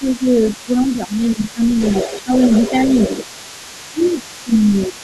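The echo canceller likely failed to fully remove the other side's voice leaking through, so a second voice sits about 15 dB below the speech throughout. Speech suppressed in double talk, as the canceller likely turned both voices down, dips the talker by roughly 10 dB from 0 to 1.81 s, 2.05 to 2.44 s, 3.9 to 4.26 s and 4.44 to 4.99 s.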